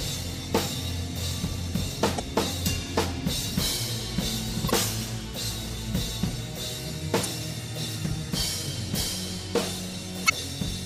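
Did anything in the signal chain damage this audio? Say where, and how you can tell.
Yes. Damaged data in a compressed stream shows up at 2.16–2.20 s, 4.67–4.71 s and 10.26–10.30 s as brief disruptions of about 45 ms each. Corrupted bytes made the decoder misread those frames, lose sync and hunt for the next valid frame header.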